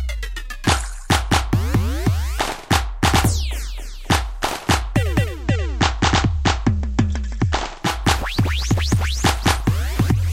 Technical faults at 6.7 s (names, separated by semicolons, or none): digital radio blending to analogue